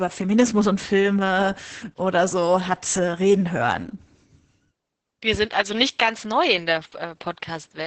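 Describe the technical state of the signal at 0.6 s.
At 0.6 s, as throughout, Opus voice compression in SILK wideband mode cuts everything above 8.8 kHz and coarsely codes the excitation, consistent with about 10 kbps, leaving speech muffled, hoarse and slightly robotic.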